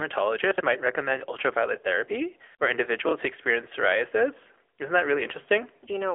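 Throughout this speech clip the sound is thin and boxed-in, with a buzzy, synthetic edge. Nothing reaches above about 3.5 kHz, and the lows below 300 Hz are gone, leaving the 300 to 3.4 kHz telephone band. This is the AMR narrowband mobile codec (AMR-NB): it samples at 8 kHz and rebuilds the voice from a vocal-tract model fed by sparse pulses. The clearly audible coding damage fits a mid-rate mode around 10 kbps.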